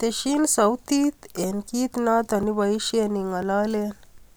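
At 1.44 s, before "eng kiit noto", then 2.43 s, after "sautit eng kiit noto", and 3.42 s, the speech skips. This is audio missing between chunks. One-second chunk handovers likely drop a few milliseconds each time.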